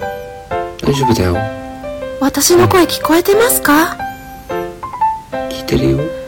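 Hard clipping appears at 0.88 to 1.36 s, 2.24 to 3.84 s and 5.69 to 5.92 s, with peaks driven about 8, 12 and 4 dB past full scale and cut flat. Unlike rounded soft saturation, the flat tops give a gritty, bright crackle, harshest in the long middle stretch.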